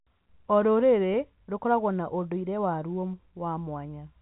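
At 1.13 s the speech has a brief packet loss with the last packet repeated. About 10 ms of audio went missing, which fits a single lost packet. The receiver filled the gap by replaying the packet before it. That copy seldom lines up with the pitch cycle. The result is a small blip in the flow rather than a buzz. The G.711 telephone band stays narrow, ending at 4 kHz.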